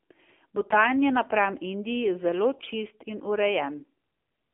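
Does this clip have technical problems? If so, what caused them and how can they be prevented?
Yes. Throughout, the speech went through an AMR narrowband mobile codec at a low mode, which sounds consistent with 7.4 kbps. Its pulse-driven vocal-tract model keeps only a 250 Hz to 3.4 kHz line band, so the voice sounds thin, muffled and plainly buzzy and synthetic. Prevent this by carrying the call on a wideband codec or a higher AMR mode.

From 2.58 to 2.67 s, AMR bit errors hit a short run of frames, which fits about four 20 ms frames. Roughly a tenth of the weakly protected bits flipped, misplacing the excitation pulses, so the voice briefly turns hoarse, scratchy and gargly while keeping its pitch and level. Prevent this with a stronger radio link or more robust channel coding.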